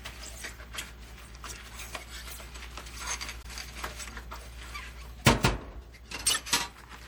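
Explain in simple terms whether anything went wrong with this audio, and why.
MP3 compression, throughout the clip: the sound is watery and swirly, with dull treble and smeared sharp onsets. The likely cause is low-bitrate MP3 encoding, which cuts off high frequencies and drops quiet detail that flickers in and out as the encoder runs short of data.

Corrupt frame decoded, at 3.42 to 3.46 s and again at 6.27 to 6.37 s: a short faint blip at the first time and a longer, much louder burst at the second. Damaged data was played as if it were valid, putting sound at wrong frequencies: about one frame's worth first, then roughly four in a row.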